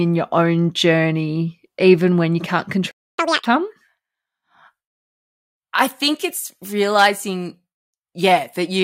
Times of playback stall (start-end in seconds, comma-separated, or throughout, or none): 2.91-3.18